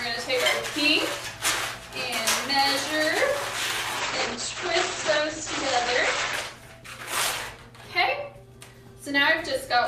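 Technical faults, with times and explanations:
3.93 to 9.57 s, call bitrate drop: The audio turns rough and muffled. Its bandwidth shrinks from 20 kHz to 8 kHz. The encoder is coding far more coarsely, which fits a fall from about 96 kbps to 13 kbps. The worst stretch lasts 1.82 s.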